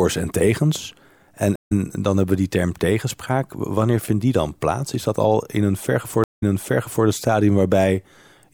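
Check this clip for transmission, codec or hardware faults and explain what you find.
Two stream reconnects are audible. At 1.56 to 1.72 s, the sound drops out for 137 ms. It resumes about a tenth of a second later. At 6.24 to 7.06 s, after "dat al in een", 166 ms of silence follows. The sound resumes 0.65 s earlier and repeats material. Each time the connection broke and the player restarted its decoder mid-stream.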